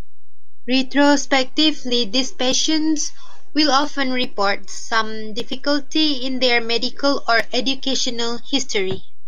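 Across the whole speech clip nothing stands out to the ear, because a DC offset is silent in itself: the entire waveform rides on a constant shift of about -20 dBFS rather than centring on zero. That fixed displacement sits at 0 Hz, showing up as steady energy at the very bottom of the spectrum, and it eats into headroom, so peaks on one side of the waveform run out of room sooner than they should.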